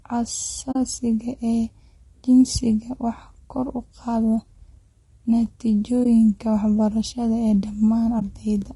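Throughout the speech, low-delay AAC compression likely accounts for the rough, grainy timbre; spectrograms show noise filling gaps between harmonics and a thin, synthetic-looking top band. AAC frame loss with muting leaves a soft-edged hole at 0.71 to 0.76 s, which fits two lost frames, then brief dips at 6.04 to 6.06 s and 8.19 to 8.22 s. Waveforms taper smoothly to silence and back.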